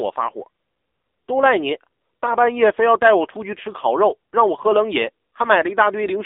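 AMR narrowband mobile codec damage runs through the whole recording, from start to finish. The speech passes only between 300 Hz and 3.7 kHz, so nothing above 3.7 kHz survives, and sibilants and airiness are gone. The codec rebuilds the voice from a vocal-tract model driven by sparse pulses in 20 ms frames. The coding damage is heavy, with a buzzy, synthetic edge that points to a low bitrate around 6.7 kbps.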